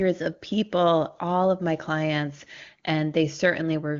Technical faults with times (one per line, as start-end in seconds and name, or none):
none